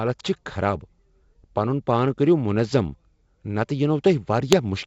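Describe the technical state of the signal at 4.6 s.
At 4.6 s you're in a short burst of bit errors on the ADPCM link, 4.52 to 4.61 s. Flipped bits throw off the decoder's step size and prediction, giving pops and rough, jumpy level.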